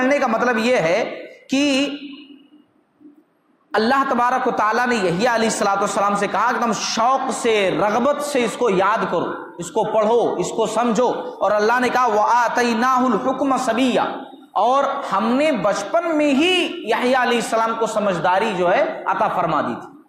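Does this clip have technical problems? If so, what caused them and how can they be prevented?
No, there are no technical problems to point to anywhere in this clip. With nothing going wrong, there is no cause to trace and nothing that needs preventing.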